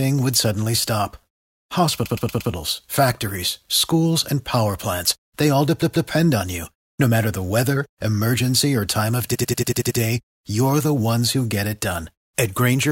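At 2.05 to 2.51 s, 5.81 to 6.09 s and 9.34 to 9.99 s, repeated frames make the speech stutter: blocks of 116, 139 and 93 ms replay four, two and seven extra times, lengthening the audio. Each block probably spans several compressed frames. The waveform shows identical copies side by side, and the spectrogram shows matching stripes.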